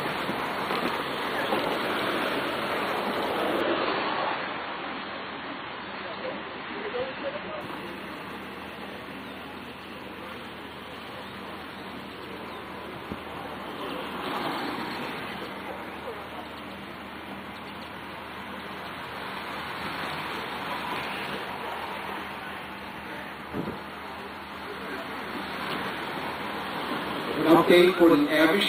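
An adaptive stream at a lower bitrate runs from 3.61 to 7.61 s: the audio suddenly loses everything above about 4.6 kHz and turns grainy, then snaps back without a gap. The drop points to the player briefly switching to a much lower-bitrate AAC rendition, around 16 kbit/s, when the connection slowed.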